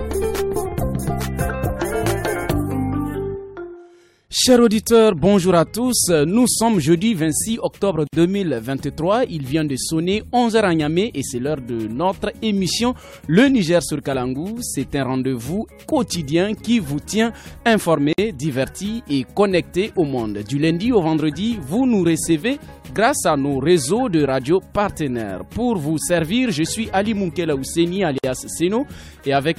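At 8.07 s the sound drops out for about 56 ms, until 8.13 s. The same gap returns at 18.13 s and 28.18 s, each about 54 ms long. The spacing is a steady 10 s. This is a gap at a join of encoded pieces. The audio was encoded in separate pieces and joined untrimmed. Each piece's start-up silence and padded last frame remain. Each gap has smeared edges. Then the sound resumes where it left off.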